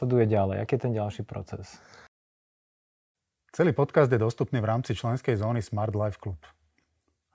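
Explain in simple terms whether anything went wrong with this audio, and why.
Nothing went wrong here: the speech comes through without any audible fault anywhere in the recording.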